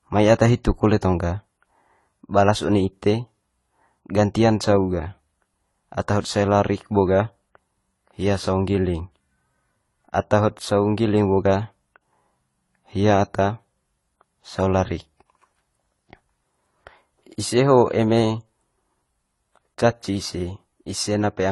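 From start to finish the speech carries compression damage of more than one kind at once, most likely from transcoding between lossy codecs: a low-rate AAC-style encode followed by a Vorbis re-encode. Nothing survives above 11.5 kHz, and the smeared, swirly artefacts of the first codec mix with a second, different texture of warbling. A single lossy encode would leave one consistent artefact character; here two distinct kinds overlap.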